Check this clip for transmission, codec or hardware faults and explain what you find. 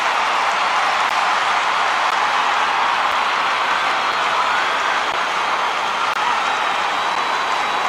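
One fault appears: a repeating gap between stream segments. Brief silent holes fall at 1.09, 2.11, 3.12, 5.12, 6.14 to 6.16 and 7.15 s. They recur about once per second, matching 1.0 s segments. Adjacent segments' timing doesn't line up, so the player pads with silence. Each hole lasts about 6 to 21 ms, with abrupt edges. No audio goes missing. The sound just stops and restarts.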